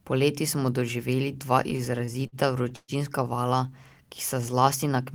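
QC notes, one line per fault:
1.63–2.91 s, repeated stalls (stutter): right after "smo doživeli dva", the speech hitches thirteen times as the jitter buffer keeps running dry. The receiver stretches the last sound, fading it on the longest 121 ms wait. About 286 ms is filled, roughly a fifth of the span, so it drags without losing content.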